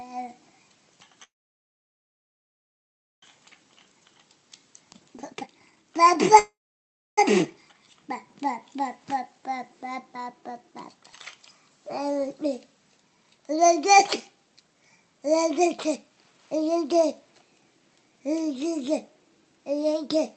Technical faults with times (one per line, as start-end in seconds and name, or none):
1.23-3.24 call audio freeze
3.48-6.37 jitter buffer speed-up
6.39-7.19 call audio freeze
14.36-17.34 jitter buffer speed-up